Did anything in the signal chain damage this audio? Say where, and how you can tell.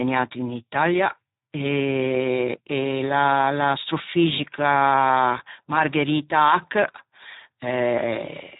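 Yes, at the codec stage: the speech went through the Speex codec at a heavily degraded setting, which fits a bitrate of about 8 kbps. Across the whole clip, too few bits for the excitation leave it hoarse and noisy, with nothing above 3.8 kHz.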